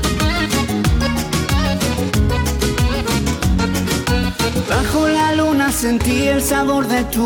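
No technical faults are audible anywhere in the recording.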